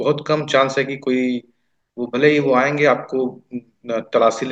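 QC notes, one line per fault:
No faults heard in this speech clip.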